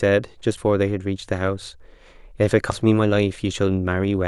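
Damaged data in a compressed stream breaks the speech twice, from 0.54 to 0.58 s and again from 2.68 to 2.72 s. Both times a stretch of the coded stream arrives corrupted, so the decoder misreads those frames, loses its lock on the frame structure and has to hunt for the next valid header before normal decoding resumes. Each dropout lasts roughly 40 ms and comes through as a short, harsh chirp or blip.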